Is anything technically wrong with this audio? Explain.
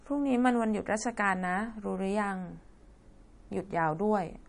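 Yes, the speech carries MP3 compression damage throughout, plainly audible, and the bit starvation points to a low rate of around 40 kbps. The encoder is likely dropping weak frequency lines frame by frame and capping the treble, so it sounds watery and swirly, with chirpy sibilants and smeared consonant attacks.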